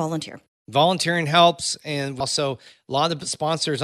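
At 2.20 s, after "volunteering helps and", compressed frames were skipped, losing roughly 150 ms (about seven 26.1 ms frames). The speech jumps ahead.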